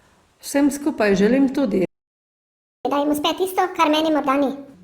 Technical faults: playback stall; catch-up at higher speed

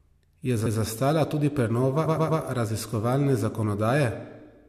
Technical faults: repeated frames

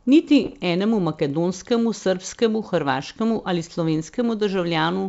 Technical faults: bit errors on an ADPCM link

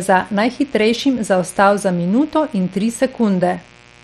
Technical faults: mains buzz

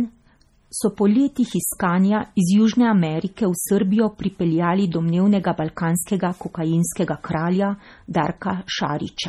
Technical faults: MP3 compression

